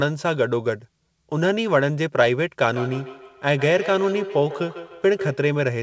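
Speech with feedback echo between two devices from 2.68 to 5.51 s. Sounds repeat roughly every 150 ms, thinning, peaking about 11 dB below the speech. A second device's playback re-enters this microphone.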